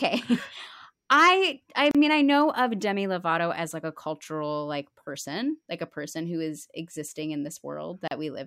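At 1.91 s and again at 8.08 s the speech drops into a short silence, about 34 ms each time, then picks up right where it left off. That's a gap at a join of encoded pieces: separately encoded chunks were butted together untrimmed, so encoder start delay and end padding left dead air, with smeared edges.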